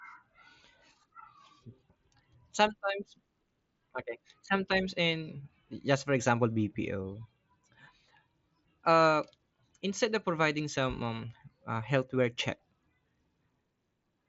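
No technical faults can be heard anywhere in the speech. The Bluetooth mSBC headset codec path works as expected, with nothing above about 7.7 kHz and only the light graininess that this codec leaves on louder passages.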